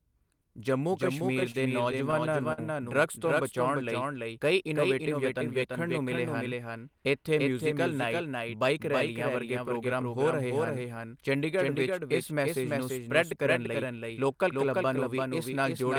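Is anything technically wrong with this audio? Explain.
Yes, there are two faults.

Throughout the speech, every phrase is followed by a second copy roughly 300 ms later and about 5 dB quieter, dry and full-band with no room colour. This doubled audio track is likely from the same signal being captured again through a slower path.

From 1.19 to 2.60 s, the speech drags and stutters through nine brief stalls totalling about 137 ms, the longest 51 ms. This is repeated stalls (stutter): packets arrived late, the jitter buffer kept running dry, and the receiver stretched the last sound each time, so nothing is lost.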